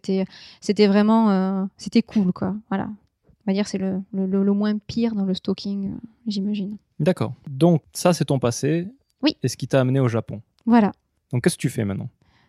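No technical fault can be heard anywhere in the recording, and the signal holds steady throughout with nothing that points to a problem in how it was captured or carried.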